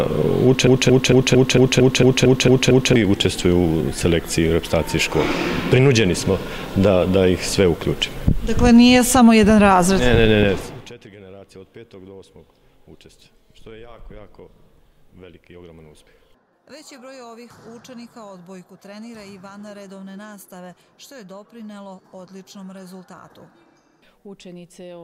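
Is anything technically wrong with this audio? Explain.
Yes, there's a broken-record loop near the start. From about 0.67 s to 2.96 s, a fragment roughly 0.23 s long (about 226 ms) plays ten times back to back, identical each pass, so it has a stuttering, stuck-needle feel. The likely cause is a stalled player, encoder or stream that kept resending the last chunk it had buffered. Whatever audio belonged in those two-odd seconds is simply gone, not delayed.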